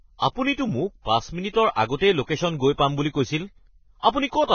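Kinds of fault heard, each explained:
Vorbis compression: the speech sounds hissy and grainy throughout, with nothing above about 6.6 kHz, so sibilants lose their crispness, and consonant onsets are smeared. This is likely low-quality Vorbis coding, consistent with a very low bitrate around 16 kbps. The encoder lowers the bandwidth and quantises the remaining treble so coarsely that its fine detail is replaced by noise of similar energy, which roughens tones and blurs attacks.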